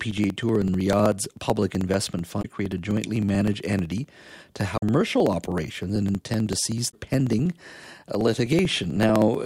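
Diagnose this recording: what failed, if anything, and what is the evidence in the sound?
Two things went wrong here. First, periodic USB or driver dropouts at the driver or buffer stage: from 0.05 s to 9.41 s there's a steady tick every 0.063 s, around 150 in all, each skipping roughly a millisecond of speech. Something's stalling the bus on a fixed schedule.

Second, damaged data in a compressed stream, so this is a codec or storage issue. You get short glitches at 2.39 to 2.45 s, 4.74 to 4.83 s and 6.88 to 6.94 s, where the decoder hits bad frames, loses sync and searches for the next header it can lock onto.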